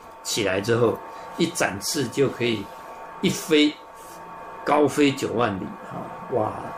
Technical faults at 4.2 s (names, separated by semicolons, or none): none